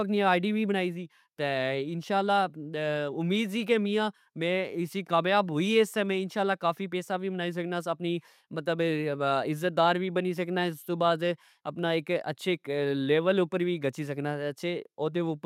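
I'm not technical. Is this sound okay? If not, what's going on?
Yes, no technical faults can be heard anywhere in this speech recording.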